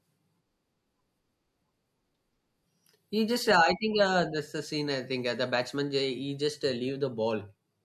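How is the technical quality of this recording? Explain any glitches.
Nothing stood out as a technical problem on listening to this recording, so there are no glitches to explain.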